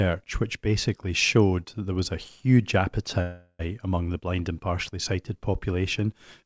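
Audio from a call, band-limited to nothing above 8 kHz, which fits a wideband codec like G.722, has one call audio freeze from 3.22 to 3.61 s. For about 0.37 s the sound stalls into a fading smear of the last bit of audio instead of a clean dropout, and then picks up right where it left off with nothing skipped. The likely cause is packets getting held up in transit and the jitter buffer running dry, so the receiver just stretched what it had. Everything after that point lands roughly 373 ms later than it should.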